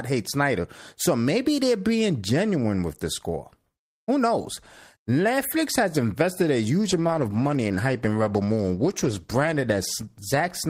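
From 6.83 s, just after "has invested a", a call bitrate drop makes the speech rough and muffled to the end. The encoder's rate, apparently cut from about 40 to 14 kbps, leaves the spectrogram's upper band empty.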